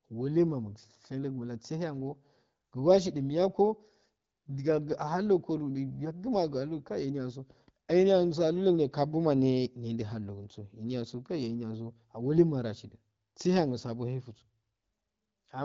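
Nothing here needs flagging: it's speech carried over the AMR wideband (HD Voice) codec at 12.65 kbit/s, and apart from the light touch that codec leaves at that rate, there are no technical faults to point to.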